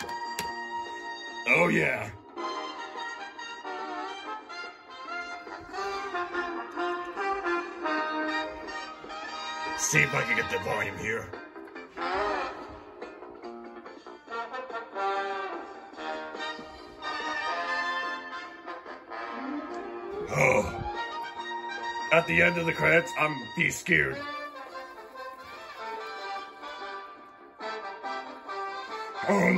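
Nothing in this audio stands out as a technical fault; it runs along without any glitch, dropout or odd disturbance to point to.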